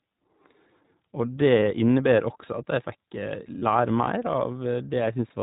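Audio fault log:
Throughout: iLBC codec. The whole thing is squeezed into narrowband, so nothing above 4 kHz gets through and the top end just isn't there. It's clear enough but has that slightly rough, synthetic edge, because each short frame's excitation is coded on its own with no help from the one before. The damage is plainly audible, and the texture fits the 15.2 kbps mode running 20 ms frames.
1.61 s and 3.60 to 3.63 s: lost iLBC frames. Each is a brief dropout of about 20 ms, which sounds like a single frame going missing. The decoder fills the hole by repeating the last pitch cycle with a bit of noise mixed in, so you get a tiny held, faintly buzzy blip instead of silence. Since iLBC frames stand alone, the sound locks straight back in right after each one.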